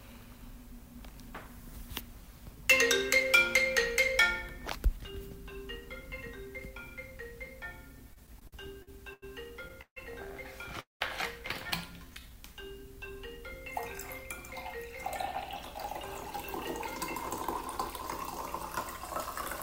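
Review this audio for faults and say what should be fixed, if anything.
Repeated stalls (stutter) run from 8.13 to 9.24 s. The sound hangs six times in that stretch, the longest hold lasting 90 ms, and about 249 ms of the span, roughly a fifth of it, is made-up continuation rather than new audio. Packets were arriving late or slower than playback consumed them, so the jitter buffer kept draining. Each time, the receiver stretched the last sound forward and then resumed. Nothing is lost, but the passage drags and stutters.

Two call audio freezes follow, at 9.81 to 9.98 s and at 10.80 to 11.03 s. In each, the audio hangs on a fading continuation of the last sound that decays into silence. The first freeze lasts about 149 ms, of which 70 ms is silent. The second lasts about 203 ms, of which 150 ms is silent. When the sound picks up again, it carries on from exactly where it stopped, so no content is missing. 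Instead, a gap has been inserted and playback now runs later than before. The likely cause is packets held up in transit, leaving the jitter buffer empty until they arrived.

A jitter buffer slow-down occurs from 12.05 to 12.89 s. Playback in this stretch runs at about 91% speed while the pitch stays unchanged, and sounds are drawn out. Roughly 80 ms is added across the span. The receiver was rebuilding its reserve by repeating single pitch periods and small fragments of pauses, which lengthens the audio without shifting its pitch.

To prevent all three faults, fix the network path's delay variation and congestion, or give the jitter buffer a larger or faster-adapting target, so it never runs dry.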